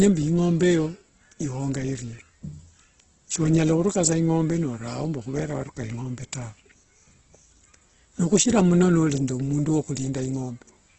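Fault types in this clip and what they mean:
Opus compression: The speech sounds heavily rough and grainy all the way through, with tonal parts turned noisy rather than swirly, and nothing above 8.2 kHz. That's likely Opus in its music mode filling starved bands with folded or noise content, which fits roughly 12 kbps.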